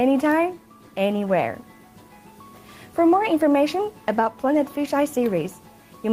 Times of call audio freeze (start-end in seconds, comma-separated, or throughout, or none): none